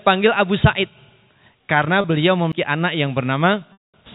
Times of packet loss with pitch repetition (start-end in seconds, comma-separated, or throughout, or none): 2.01-2.04, 3.73-3.94